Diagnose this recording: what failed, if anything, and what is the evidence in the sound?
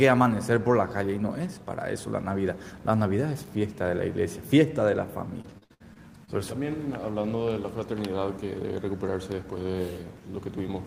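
Network trouble: repeated packet loss from 5.41 to 6.30 s, six gaps up to 62 ms patched by stretching prior sound, so a quarter turns choppy and robotic.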